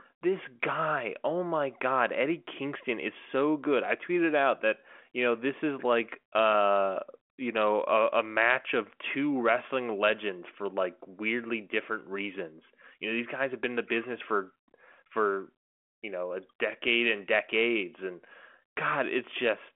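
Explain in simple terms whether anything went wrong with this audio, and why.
Listening through the recording, nothing stood out as having gone wrong.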